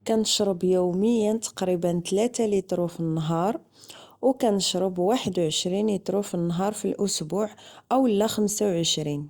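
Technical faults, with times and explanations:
No technical faults can be heard in this recording.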